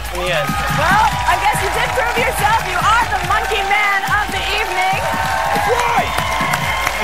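Nothing is technically wrong with this clip.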